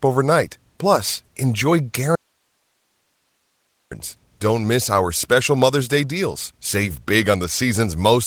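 At 2.16 s the speech cuts out abruptly and does not return until 3.91 s, an audio dropout to a faint residue lasting about 1.75 s. The gap holds only low hiss, roughly 50 dB below the speech. The likely cause is a break in the wanted signal while the downstream path stayed live. On a waveform this appears as a sudden collapse to a thin noise floor. A spectrogram shows a clean vertical edge on each side and only faint broadband speckle between them.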